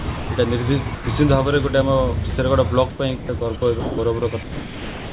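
From 0.00 to 0.29 s, the sender's voice detector likely toggled between sending and muting several times, so the sound is chopped by the voice detector: about 200 ms is replaced with comfort noise, and the opening stutters.

At 0.95 to 1.07 s and again at 2.30 to 2.33 s, the detector likely mistook quiet sound for background and stopped sending. The sound is dropped by the voice detector for 120 ms and then 30 ms, and steady comfort noise fills each gap until the sound resumes.

From 2.90 s to the end, the detector likely resumes its switching, and the sound is again chopped by the voice detector. About 1.2 s in total becomes comfort noise, which makes the sound patchy, all within the call path's band that stops at 4 kHz.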